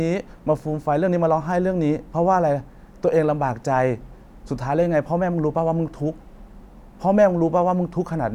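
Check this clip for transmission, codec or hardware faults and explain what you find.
No transmission, codec or hardware faults.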